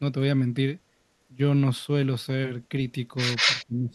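From 3.36 to 3.65 s there is an echo leak. A delayed copy of the speech follows about 194 ms behind it, roughly as loud as the original. A far-end echo canceller likely let its loudspeaker pickup pass back into the call.

Speech suppressed in double talk follows from 3.68 s to the end at 3.95 s. The voice dips sharply, by around 15 dB at its deepest, for about a third of a second. The canceller, likely confused by overlapping talk, turned the near-end speech down.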